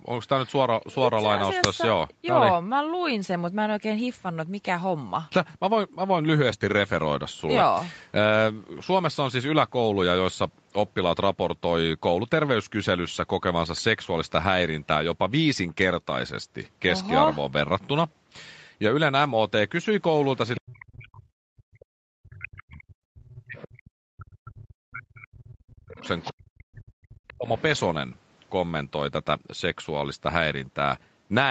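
At 1.64 s there's a sharp crack, a roughly 5 ms burst of harsh digital noise. That's an uninitialised buffer: a block got played out before any audio was written into it, so whatever junk sat in memory went straight to the output as samples.

From 20.56 to 20.85 s you can hear the other side's voice leaking through, a faint second voice sitting roughly 15 dB under the talker. It comes back at 23.37 to 23.74 s and 25.73 to 26.31 s at about 20 dB down, and once more at 27.58 to 27.8 s at around 25 dB down. That's likely the far end playing on a loudspeaker with the echo canceller not fully removing it from the mic.

Overlapping that stretch, from 20.63 to 27.48 s, the talker's own level keeps dipping and breaking up, at worst by something like 40 dB, across about seven seconds. It points to speech suppressed in double talk: with both sides going at once, the canceller couldn't tell the talker from the echo and pulled everything down.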